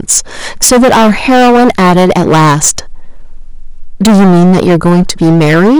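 From the first syllable to the end, the speech is hard clipped. The signal was driven about 17 dB beyond what the chain could pass, so roughly a third of all samples are sheared flat at the ceiling. The flat tops add harmonics high into the spectrum, heard as a harsh, buzzing fuzz on every loud sound, not crackle on occasional peaks. Unlike soft saturation, which rounds peaks into a warmer thickening, this edge is abrupt and gritty.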